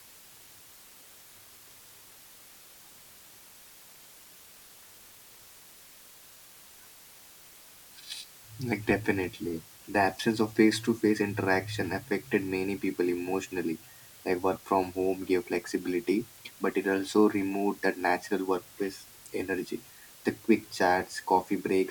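Low bit depth with dither runs throughout the speech. The hiss is constant, even and undistorted, about 25 dB below the speech, which points to roughly 7 bits.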